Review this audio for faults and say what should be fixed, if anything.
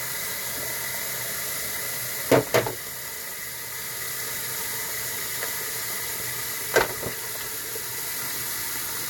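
Nothing to fix: no faults found anywhere in the audio, so no corrective action is needed.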